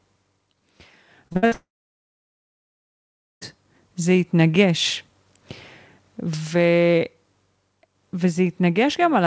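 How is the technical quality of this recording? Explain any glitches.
The recording has two clear network faults close together early on, heard through a wideband call path whose codec sound fits G.722, with nothing above 8 kHz.

From 1.28 to 1.53 s there is repeated packet loss (robotic sound). Four short gaps, the longest about 58 ms, are each filled by extending the preceding audio, so about 61% of that stretch is patched. The result is choppy speech with pieces missing.

From 1.53 to 3.43 s there is a long gap in the speech, likely a long network dropout. The last sound is briefly stretched into a fading buzz, followed by about 1.75 s of silence. The speech then resumes, and about 1.9 s of it is simply missing.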